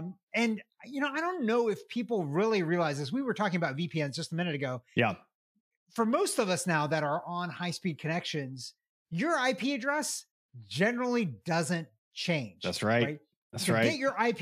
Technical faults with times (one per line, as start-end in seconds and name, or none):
none